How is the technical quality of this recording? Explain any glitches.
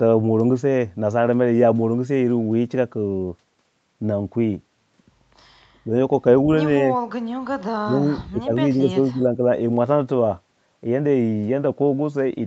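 The speech has three dips in level, with nothing above 8 kHz, which fits a wideband call codec. The dips sound like speech suppressed in double talk, likely from an echo canceller turning down the near talker while the far side was speaking. At 5.84 to 5.9 s there is a brief dip of about 5 dB. From 7.79 to 8.54 s there is a deep drop of about 30 dB, heard as the speech nearly vanishing. From 8.72 to 9.43 s the speech drops by about 15 dB in broken patches. On a waveform these show as pinched, gated stretches. A spectrogram shows the energy fading across the band at those times.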